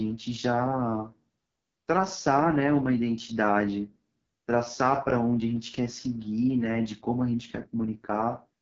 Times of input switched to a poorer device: none

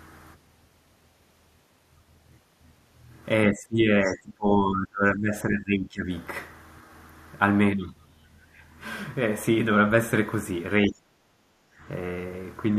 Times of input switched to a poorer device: none

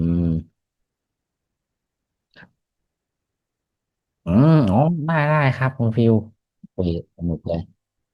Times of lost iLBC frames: none

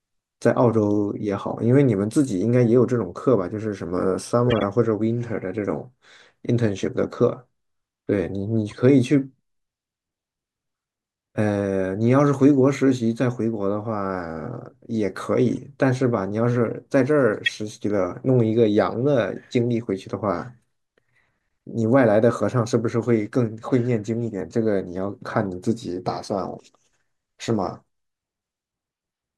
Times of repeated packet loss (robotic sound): none

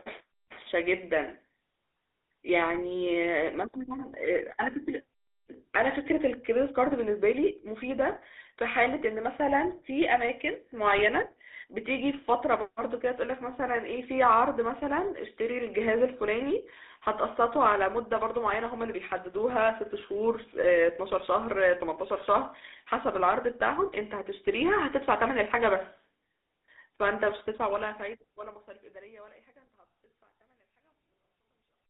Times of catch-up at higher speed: none

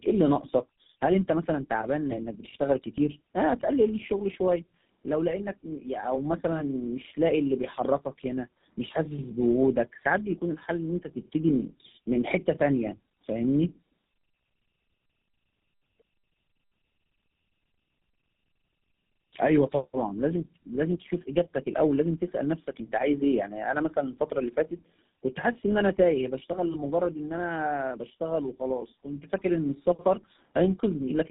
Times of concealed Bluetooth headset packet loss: none

